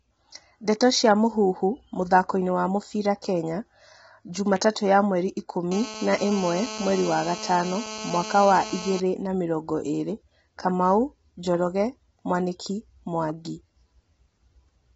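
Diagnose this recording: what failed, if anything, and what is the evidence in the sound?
Codec stage: rough, grainy speech throughout, with nothing above 7.7 kHz. Likely low-delay AAC compression, whose short frames smear harmonics at a bitrate that fits 16 kbps.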